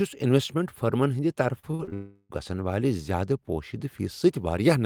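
A speech recording, broken up between 1.59 and 1.94 s by repeated packet loss, giving a choppy, robotic sound. Five short holes, the longest 37 ms, are patched by stretching the preceding sound, so about 140 ms, roughly 41 percent of that span, is synthetic fill. From 1.94 to 2.31 s the speech gives way to a continuous smeared extension of the last sound lasting about 360 ms with no silent gap, and the speech that resumes afterwards is missing that section, most likely from a long network dropout.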